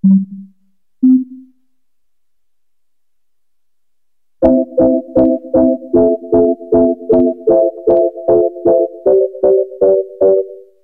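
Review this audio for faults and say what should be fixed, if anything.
Nothing needs fixing; no faults are audible.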